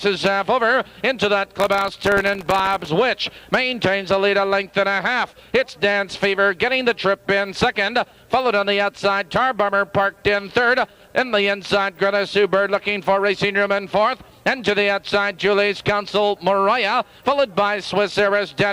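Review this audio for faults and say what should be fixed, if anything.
Processor overload crackle from 1.60 to 2.89 s: sub-millisecond buffers repeatedly miss their deadlines, each repeating a hard-edged scrap of old audio, heard as gritty tearing. Prevent it by raising the buffer size or reducing the processing load so every buffer finishes on time.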